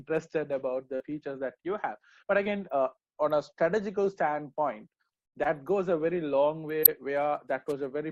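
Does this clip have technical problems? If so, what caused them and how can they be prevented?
Yes. Brief smears in the sound at 0.95 to 1.02 s and 2.44 to 2.47 s are short concealed packet loss. About 40 ms and 20 ms of audio arrived too late, and the receiver filled each gap by extending the preceding sound before blending back. A larger jitter buffer and forward error correction on the network link would prevent this.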